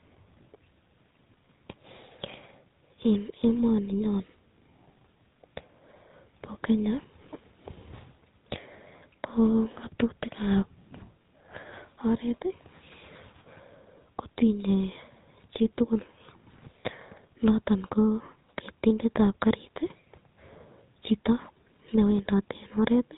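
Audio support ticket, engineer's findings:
GSM full-rate codec damage across the whole clip: buzzy, gravelly roughness on speech, no content above about 3.9 kHz. Regular-pulse excitation keeps only a sparse subset of excitation samples, giving a rasping texture consistent with a 13 kbps GSM full-rate path.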